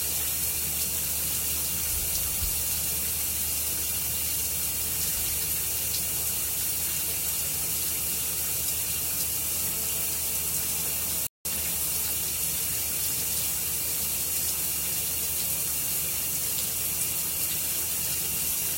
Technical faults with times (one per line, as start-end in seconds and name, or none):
11.27-11.45 playback stall